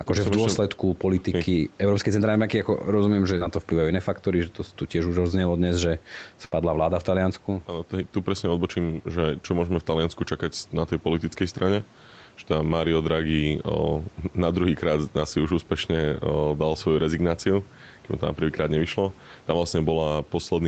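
Throughout the speech, a fast limiter or compressor is likely working against excessive gain, giving gain pumping. The level swings by about 5 dB, so the speech sounds squashed and flattened in dynamics.

From 3.37 to 3.43 s, between "rozumiem že" and "na to", a short concealed packet loss occurs. About 40 ms of audio failed to arrive in time, and the receiver filled roughly 35 ms by extending the preceding sound before blending back, heard as a brief smear or wobble.

From 6.45 to 6.53 s, just before "vláda v", a burst of packet loss removes about 60 ms of audio. The receiver stretched the last sound across roughly 63 ms while fading it, producing a held, decaying buzz or hiss before the speech jumps ahead.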